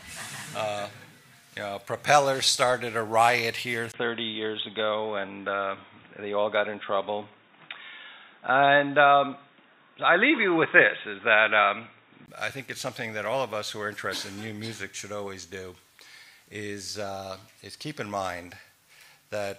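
At 3.92 s, a 20 ms gap. The sound turns dull and boxy until 12.28 s, cut off above 3.8 kHz. Likely an input switched to a poorer device.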